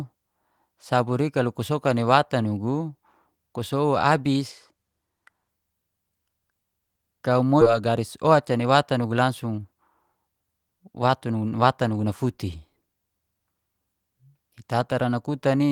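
From 4.49 to 5.49 s, just after "watan nugu ku sow", there's channel delay with comb filtering. One channel lags the other by about a sample, a tiny fraction of a millisecond, so summing to mono cancels the very top. The first notch sits up around 20 kHz, giving a slight dulling of the airy end rather than a strong hollow sound.

At 7.61 s the audio skips ahead. About a second of speech is dropped and the two sides are butted together with no gap, so it jumps forward abruptly, as if the receiver threw away a backlog it was holding.

Right after, from 7.71 to 9.65 s, a jitter buffer speed-up kicks in. The receiver trims tiny pitch-period slices over and over, running about 9% fast at unchanged pitch and shaving off roughly 200 ms in total. The speech sounds a bit rushed there.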